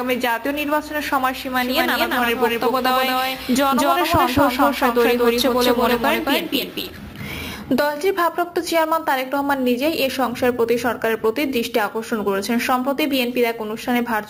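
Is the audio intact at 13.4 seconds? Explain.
Yes, the audio at 13.4 seconds is intact, with no dropout, click, distortion or other fault at that moment.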